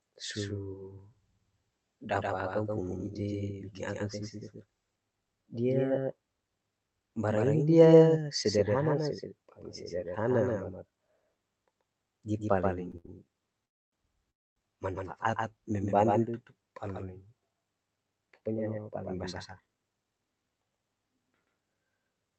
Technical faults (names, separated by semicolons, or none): doubled audio track; short stall from a late packet; call audio freeze; jitter buffer speed-up